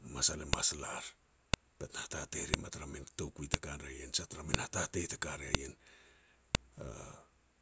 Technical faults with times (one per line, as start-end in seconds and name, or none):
0.53 file header played as audio
1.54 file header played as audio
2.54 file header played as audio
3.54 file header played as audio
4.54 file header played as audio
5.55 file header played as audio
6.55 file header played as audio